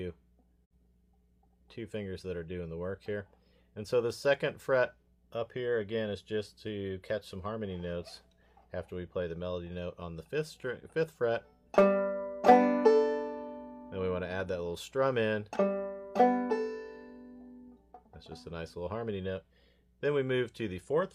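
At 0.64 s a digital broadcast dropout mutes the audio until 0.72 s: the receiver lost a frame and faded to silence over about 20 ms. That fits one missing frame. The waveform shows a short flat gap, and the spectrogram shows a clean vertical blank band.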